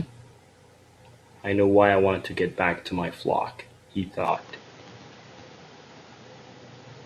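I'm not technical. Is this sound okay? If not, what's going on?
No. From 4.28 s to the end, the speech abruptly turns duller, with a changed level and new background noise, likely an input switched to a poorer device.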